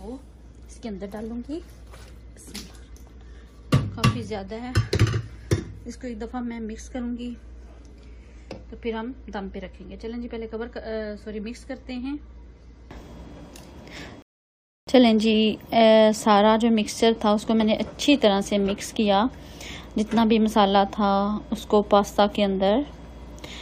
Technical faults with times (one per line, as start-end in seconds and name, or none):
14.22-14.87 rebuffering stall